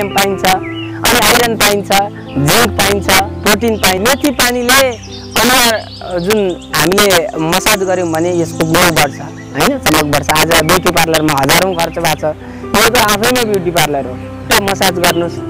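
Integer overflow runs throughout: peaks pushed about 9 dB past full scale wrap to the opposite sign instead of flattening, so a few percent of samples produce violent cracks, far harsher than clipping.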